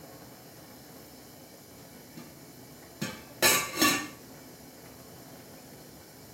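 No technical faults can be heard anywhere in this recording of sounds. Nothing in it draws attention to itself as a problem in the capture or playback chain.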